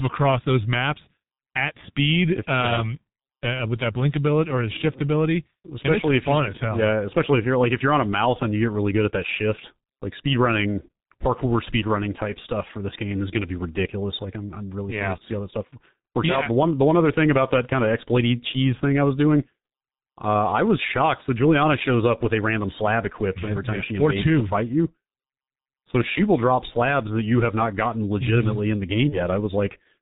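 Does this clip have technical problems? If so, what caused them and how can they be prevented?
Yes. Throughout the speech, the G.723.1 codec limits the sound to below 4 kHz and applies heavy coding damage. The result is muffled, hoarse speech with smeared consonants, consistent with its 6.3 kbit/s mode and slowly updated 30 ms frames. Preventing this means negotiating a wideband, higher-bitrate codec instead.

From 29.09 to 29.20 s, VoIP packet loss concealed by the speech codec produces a brief, fading patch of buzzy or noise-like sound. The decoder extrapolates its previous frame to cover what sounds like a single lost 30 ms frame, and the distortion lingers as later frames recover. Jitter buffering, forward error correction or a more reliable network path would reduce this.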